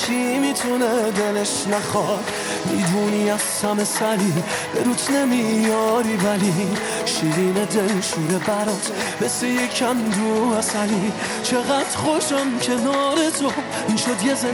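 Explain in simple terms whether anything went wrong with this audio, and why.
The resampler restarted on every block: the audio was converted to a higher sample rate, which fits 24 kHz to 48 kHz, in separate 10 ms chunks, each with a small error at its edges. That puts a buzz, 100 ticks per second, under the sound from the start until 10.17 s.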